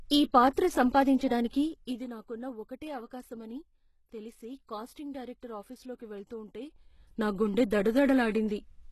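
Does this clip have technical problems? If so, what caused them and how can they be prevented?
Yes. The treble sounds gritty and metallic, with nothing above 12.3 kHz. This plainly audible damage is likely from HE-AAC compression, which fits a low bitrate of about 16 kbps. Spectral band replication rebuilds the upper bands from copied lower ones, so a spectrogram shows blocky, repeated high-frequency texture that ends sharply at 12.3 kHz. Encoding at a higher bitrate, or with plain AAC or a lossless format, prevents this.

Pre-echo appears at 0.53 to 0.56 s and at 1.50 to 1.53 s, just before "ఇది నాకున్న ఒకటే". A short hiss of about 32 and 35 ms comes before each attack. On the waveform this looks like a low smear leading into the onset. Shorter transform blocks or more bits for transients prevent this.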